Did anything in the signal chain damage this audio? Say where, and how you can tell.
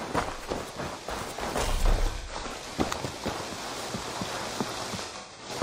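Yes, at the codec stage: AAC frame loss with concealment. From 2.18 to 2.62 s and 5.04 to 5.50 s, the sound smears into phasey patches. The decoder is rebuilding missing frames from the last good spectrum. About 0.21 and 0.26 s go missing.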